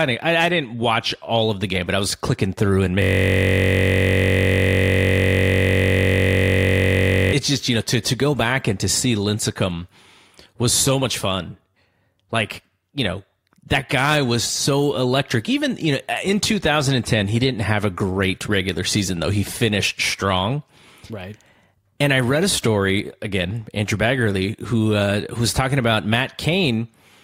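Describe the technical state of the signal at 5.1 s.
A system hang loop runs from 3.02 s to 7.33 s, so at 5.1 s the speech is gone and a single 21.33 ms fragment repeats about two hundred times. The computer or its audio driver stalled while the playback hardware kept reading the same ring buffer, a length that fits a 1024-sample buffer. Because the loop is so short, it fuses into a steady, flat buzz at 46.9 Hz rather than a stutter.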